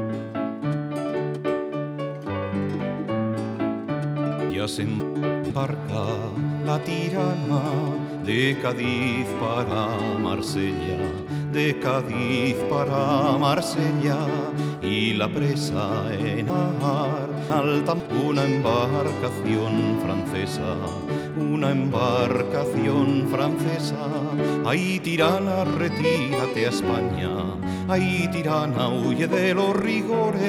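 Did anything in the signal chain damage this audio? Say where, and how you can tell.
Yes. Chunks out of order appear twice, most likely at the buffer stage. From 4.5 to 5.5 s, two half-second blocks swap places, so one plays a chunk late. From 16.5 to 18.0 s, one block arrives two chunks late and plays after both of its successors. Nothing goes missing, but each event is a short jumbled moment. Each has three hard joins where unrelated audio meets.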